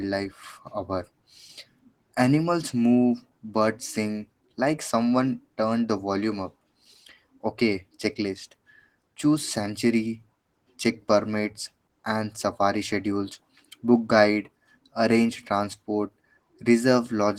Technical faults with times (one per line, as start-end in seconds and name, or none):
0.00-17.39 Opus voice compression